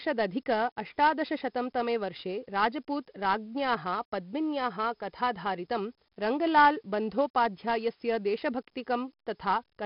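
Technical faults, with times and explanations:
Throughout, 4-bit ADPCM compression: the speech carries a gritty hiss that rises and falls with its loudness. Each sample is coded as a coarse 4-bit step from a predicted value, so the error tracks the signal level. The damage is heavy, and sharp onsets smear where the step size lags behind. Nothing sounds above 5.3 kHz, leaving the sound dull. That fits a low sample rate near 11 kHz, about 44 kbps.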